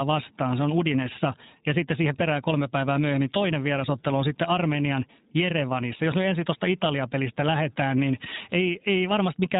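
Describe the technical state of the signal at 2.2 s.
At 2.2 s, as across the whole clip, iLBC codec coding rules the speech. Each roughly 20 ms frame is coded independently, and nothing above 3.8 kHz passes, so the speech is muffled, rough and a little synthetic, which fits the codec's 15.2 kbps mode.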